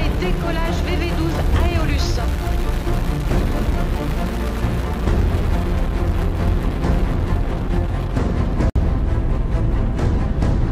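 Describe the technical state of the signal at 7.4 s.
At 7.4 s the signal is intact, with no audible technical fault at that moment.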